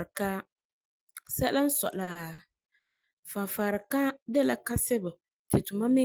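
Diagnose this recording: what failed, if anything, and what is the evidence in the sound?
Three brief holds break the speech at 2.03–2.09 s, 2.11–2.17 s and 2.33–2.40 s, where a sound is stretched by 40, 40 and 50 ms with a slight buzz or dip, then continues intact. These are short stalls from a late packet at the network stage: the jitter buffer ran empty, so the receiver prolonged the last sound until the packet arrived and resumed from the same point, adding delay without losing audio.

From 2.78 to 3.05 s the speech halts. A short fading buzz or hiss gives way to 240 ms of silence, and the speech then picks up exactly where it stopped, with nothing skipped. This is a call audio freeze, likely caused by packets held up in the network. The jitter buffer drained, and the receiver filled the wait before playback resumed, inserting a 250 ms gap.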